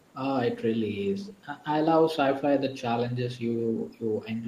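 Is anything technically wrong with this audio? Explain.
Yes, a brief echo leak at 1.25 to 1.34 s: a faint copy of the speech, about 20 dB down and 430 ms late, likely from a far-end speakerphone whose echo canceller missed it.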